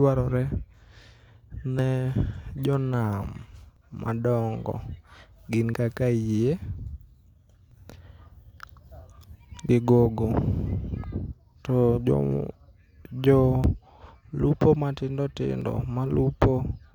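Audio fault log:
1.79, 3.76, 5.74, 7.71, 9.69, 13.64, 15.61 s, audio missing between chunks: brief skips of about 30 ms recur near 2-second intervals, likely from sound lost while consecutive processing chunks are joined.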